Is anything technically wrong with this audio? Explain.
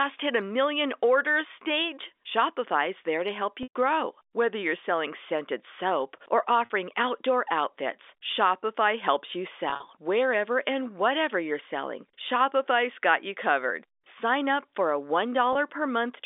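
Yes. Packet loss with pitch repetition occurs at 3.63 to 3.74 s (120 ms lost), 6.65 to 6.70 s (50 ms), 9.70 to 9.82 s (90 ms scattered across 120 ms, longest run 40 ms) and 15.53 to 15.55 s (20 ms). At each gap the receiver loops the last pitch cycle and fades it. The brief losses sound like a buzzy held tone. The 120 ms gap decays into silence before the speech cross-fades back in, heard through the narrow telephone band of G.711 coding.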